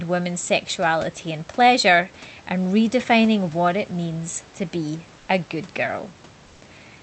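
Comfort noise in place of the background runs from 5.19 to 5.27 s in this speech recording over an Opus call path band-limited to 8 kHz. For those 80 ms the room's natural background noise, sitting about 28 dB below the speech, gives way to a flat, detail-free synthetic noise about 2 dB quieter. This is likely Opus discontinuous transmission: the sender paused during the lull, and the receiver filled the gap with generated noise roughly matched to the background.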